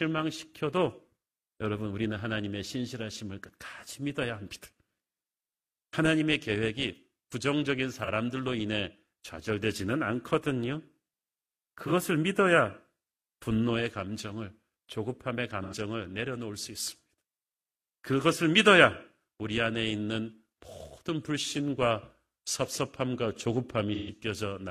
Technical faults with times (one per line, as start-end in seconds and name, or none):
8.04-8.09 AAC frame loss with concealment
11.87-11.92 AAC frame loss with concealment
15.62-15.73 AAC frame loss with concealment
23.94-24.10 AAC frame loss with concealment